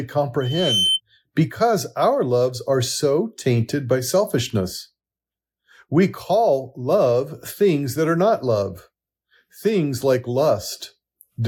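At 0.41 s a loudspeaker feedback squeal begins in the speech. A microphone is picking up the loudspeaker it feeds. Around 3.1 kHz the loop gain rises above one, so that frequency feeds itself. It swells for about 0.4 s into a piercing single tone. At its peak it is roughly as loud as the speech. The squeal stops at 1.01 s.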